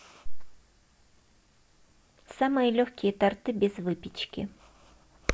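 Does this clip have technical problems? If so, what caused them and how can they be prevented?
No, nothing in this speech recording points to a technical fault, so there is no cause to trace and nothing to prevent.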